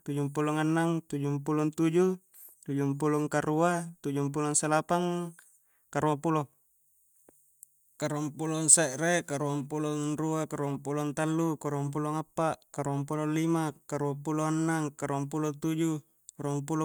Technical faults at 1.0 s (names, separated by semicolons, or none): none